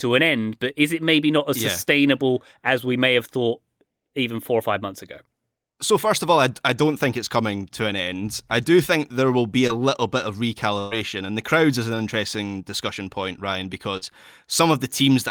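At 9.67 to 9.71 s, between "think there will be" and "little bit of", the speech briefly smears. This is short concealed packet loss: about 20 ms of audio never arrived in time, so the decoder extended the preceding sound for 17 ms, from its pitch if voiced or as shaped noise if not, and then blended back into the real signal.

At 10.79 to 10.93 s, after "little bit of" and before "and the crowds is", the sound is carried on as a continuation of what came before, turning into a held buzz or a fading hiss as it is turned down, and then the speech jumps ahead. This is a burst of packet loss: the receiver filled a 121 ms gap, and about 120 ms of the original audio is gone.

At 13.97 to 14.03 s there is another wobble from short concealed packet loss, with roughly 40 ms missing and covered by 42 ms of extended sound.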